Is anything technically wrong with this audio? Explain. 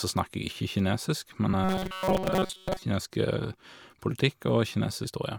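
Yes, there are two kinds of fault.

Compressed frames skipped at 1.53 s, 3.04 s and 5.03 s: whole coded frames never reach the output, so the speech jumps ahead by about 100 ms at the first two and about 150 ms at the last. This fits a 24 ms frame length.

Robotic sound from repeated short buffers from 1.64 to 2.83 s: the speech becomes a rigid metallic buzz at 188 Hz that loosely tracks the syllables, with most of the real audio in that span lost. This is likely caused by a starved playback path looping its last buffer, which fits a buffer of about 5.3 ms.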